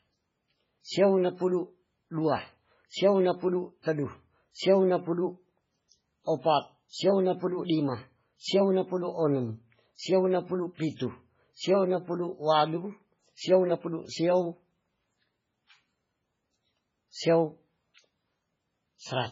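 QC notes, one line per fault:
Throughout, MP3 compression: the speech sounds heavily watery and swirly, with nothing above 7.6 kHz. That's likely a bit-starved encoder, in keeping with a rate around 16 kbps, chopping off the treble and letting weak frequency detail flicker from frame to frame.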